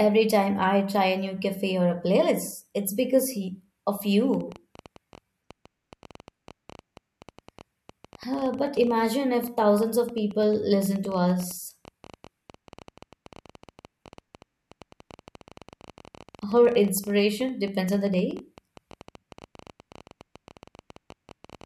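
From 4.34 s to the end at 21.65 s, a train of clicks runs under the speech, about 12 per second at an uneven pace, some two hundred in all and about as loud as the speech itself. It ticks through the pauses too, most likely interference or a faulty connection.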